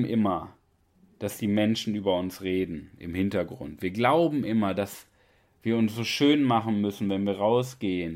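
No technical faults can be heard in this recording.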